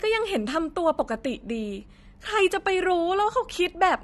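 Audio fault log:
Throughout, AAC compression: the speech sounds dull and smeared, with a watery, fizzy edge on sibilants and a warble on held sounds. It's most likely low-bitrate AAC-LC, which fits a rate around 32 kbps. At that rate the encoder can't afford the top end, so it pulls the bandwidth down and leaves gaps in the upper spectrum. Those gaps shift from frame to frame, which gives the swirly texture.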